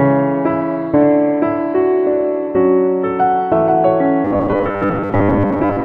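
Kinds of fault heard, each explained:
Robotic sound from repeated short buffers: from about 4.25 s to the end, the sound becomes a rigid, metallic buzz near 100 Hz. The likely cause is new audio arriving too seldom, so a roughly 10 ms stretch is replayed for most of that span.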